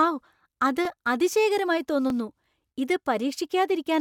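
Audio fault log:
0.85 s and 2.10 s, repeated buffer: a piece of about 11 ms of speech plays twice with a hard join, as fresh audio arrived late and the device replayed its last block, which fits a 512-sample buffer. Nothing seems lost, so it is a click-like stutter rather than a dropout gap.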